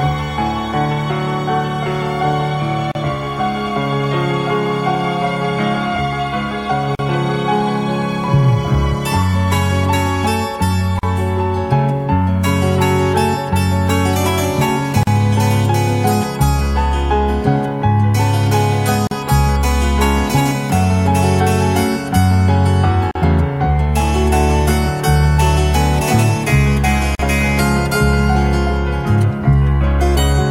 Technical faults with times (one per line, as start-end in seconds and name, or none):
2.92-2.95 gap at a join of encoded pieces
6.95-6.99 gap at a join of encoded pieces
10.99-11.03 gap at a join of encoded pieces
15.03-15.07 gap at a join of encoded pieces
19.07-19.11 gap at a join of encoded pieces
23.11-23.15 gap at a join of encoded pieces
27.15-27.19 gap at a join of encoded pieces